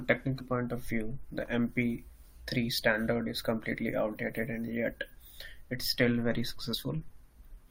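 At 6.73 s there's a compressed frames skipped moment: about one 21.3 ms frame goes missing, so the speech jumps ahead roughly 20 ms.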